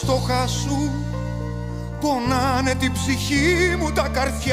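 Nothing in the recording stood out as a technical problem on listening.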